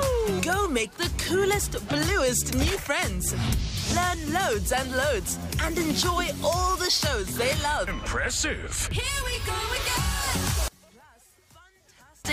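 From 10.68 s to 12.25 s the level falls by about 29 dB. The likely cause is one channel inverted: with one stereo side's polarity reversed, everything shared between the channels cancels on a mono sum. Unlike a simple gain drop, the loss comes from summation, not from the source itself.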